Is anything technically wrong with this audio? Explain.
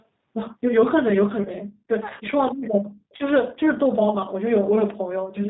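Yes, there are two faults.

Throughout, the speech sounds slightly rough and synthetic, with a dull, boxed-in quality because nothing reaches above 4 kHz. This is damage from the G.729 codec, clearly audible at 8 kbit/s. The codec rebuilds each 10 ms frame from a vocal tract filter, a pitch predictor and a handful of pulses. The voice survives as a coarse approximation, and the rebuilt excitation gives it that grainy, artificial edge.

From 1.43 to 1.48 s, the sound briefly smears into a stretched sound that fades and then recovers. This is VoIP packet loss concealed by the speech codec. About 20 ms of audio went missing, consistent with a single lost packet. The decoder filled the gap by repeating its last pitch and filter settings at falling gain. Because each frame builds on the previous one, the distortion lingers a little after the audio resumes.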